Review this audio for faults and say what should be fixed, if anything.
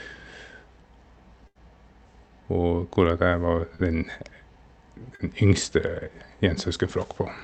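A burst of packet loss hit the stream from 1.47 to 1.58 s. About 80 ms of audio never arrived in time, and the receiver stretched the last sound across roughly 76 ms while fading it. The speech smears into a held, dying tail and then jumps ahead with a piece missing. Preventing it means giving the jitter buffer more headroom and enabling forward error correction so consecutive losses can be rebuilt.

Short concealed packet loss occurred twice, from 3.75 to 3.82 s just after "hvorak jeg var", and from 5.15 to 5.22 s. Each time about 40 ms went missing, and the decoder patched it with around 40 ms of extrapolated sound before blending back. The result is a brief wobble or smear where a consonant can drop out. Opus in-band FEC, plus a steadier network route, would cover these single short gaps.

The call path itself shows its expected codec coloration, with the top end cut at about 8 kHz, consistent with Opus running at a moderate bitrate.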